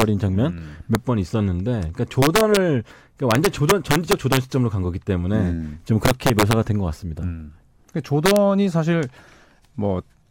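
Integer overflow cracks hit the loud speech at 0.01 s, 0.95 s, 2.22–2.57 s, 3.31–4.37 s, 6.05–6.53 s and 8.26–8.36 s. Peaks pushed past the largest integer value. Instead of being held at the limit, they wrapped to the opposite sign. Each flips across the full range. The overshoot is small, from about 0 dB up to about 4 dB. Even so, each sounds as a violent crack, far harsher than clipping.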